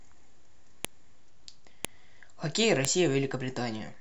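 Sharp, loud clicks at 0.85, 1.85 and 2.85 s, spaced exactly 1.0 s apart, are a file header played as audio. The speech was joined from one-second WAV pieces with their headers left in, so those header bytes play as samples and snap regardless of the signal.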